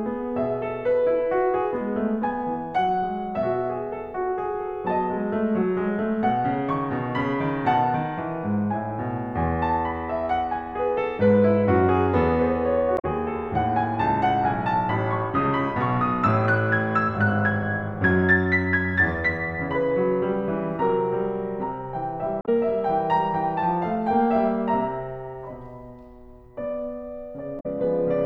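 Music with brief glitches at 12.95–13.05 s, 22.38–22.49 s and 27.56–27.66 s, caused by damaged data in a compressed stream that made the decoder lose frame sync.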